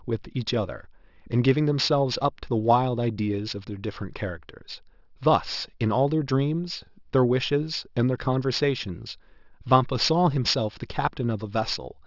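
A speech recording carries aliasing from start to finish. The top of the band sounds gritty and metallic, and energy runs right up to about 6 kHz. That fits a resample to 12 kHz with no anti-alias filter, so content above 6 kHz folds back down as wrong, unrelated tones, roughly 15 dB below the speech. Plain band-limiting would only sound dull. These folded products add harsh, inharmonic sibilance instead.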